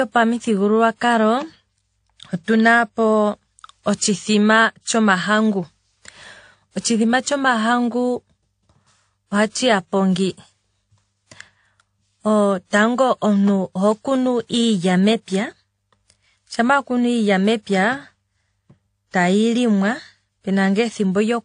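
Speech runs the full length with transcoding between lossy codecs. Nothing sits above 9.7 kHz, and swirly low-rate smearing mixes with a second layer of coarse artefacts, which likely points to a 32 kbit/s AAC-LC encode re-encoded as 64 kbit/s WMA. A spectrogram shows a flat ceiling at 9.7 kHz over blotchy, patchy detail.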